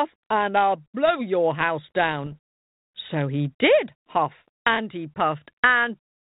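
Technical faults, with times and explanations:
2.24–2.37 s, bit errors on an ADPCM link: just after "I'll blow your house", the 32 kbit/s G.726 stream picks up a rough, crackling burst of pops and brief level jumps. Flipped bits, at a rate of a fraction of a percent, corrupt the decoder's step size and prediction, so each error rings on for milliseconds. The waveform shows spiky excursions and uneven amplitude, and the spectrogram shows scattered broadband vertical streaks capped near 4 kHz.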